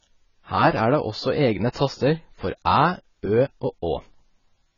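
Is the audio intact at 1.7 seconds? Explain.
No. Pre-echo smears the sound from 1.72 to 1.76 s, where a hiss runs about 36 ms ahead of a sharp onset. The codec spreads its quantisation noise evenly across a whole transform block, so noise scaled for the loud attack also fills the quiet stretch just before it. The attack loses its edge and arrives softened, announced by that brief wash of noise instead of starting cleanly.

That moment also carries the AAC compression heard across the speech, likely from AAC-LC at a very low bitrate, with heavy damage consistent with around 16 kbps. Nothing survives above 7 kHz, so the speech sounds dull and muffled, and the coarse quantisation smears detail, leaving a warbling, fizzy texture on sustained sounds and sibilants. This is the same transform coding whose block-wide noise produces the pre-echo.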